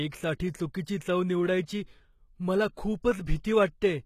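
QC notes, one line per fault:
Throughout, HE-AAC compression: plainly audible damage, treble sounds copied and stops at 14.9 kHz, likely from band replication rebuilding the top at around 20 kbps.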